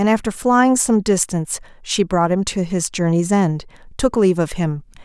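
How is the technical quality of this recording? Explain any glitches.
The technical quality of the recording is sound, with no glitches to explain.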